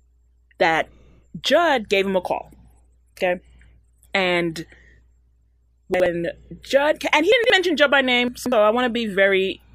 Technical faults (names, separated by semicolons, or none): chunks out of order